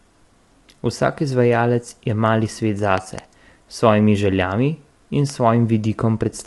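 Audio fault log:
throughout: low-delay AAC compression. The speech is rough and grainy, with noise filling the gaps between harmonics and nothing above 11.6 kHz. This is likely AAC-ELD, the low-delay AAC used for calls. Its very short frames cannot separate pitch harmonics finely, so the bits spread thin and smear energy between them. The damage fits a rate around 32 kbps. Unlike a simple low-pass, the band is not just cut; what remains also sounds grainy.
2.98–3.21 s and 5.30–5.32 s: loud pop. The first span holds two sharp pops in quick succession, peaking about 15 dB above the speech. The second is a single shorter pop, about 5 dB above it. Each is likely a sudden voltage step or pulse, from a plug, switch, static discharge or driver glitch, added onto the signal and briefly shaped by the circuits after it. Unlike a dropout or clipping, the speech carries on intact underneath each pop.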